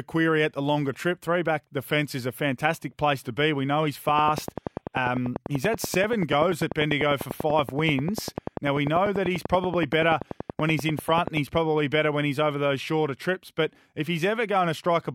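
Right after "know he's", at 4.09 s, a train of clicks starts and runs to 11.38 s, just before "he's probably better when". It's a steady tick about 10.3 times a second, some seventy near-identical pops, around 10 dB above the speech, most likely interference from nearby equipment.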